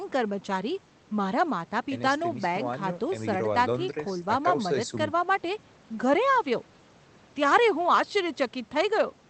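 No technical faults can be heard anywhere in the speech, which arrives over a call connection working as it should.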